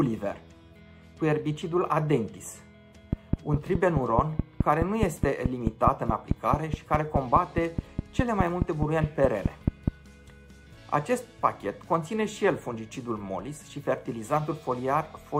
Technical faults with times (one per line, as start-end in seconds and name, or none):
3.13-9.89 train of clicks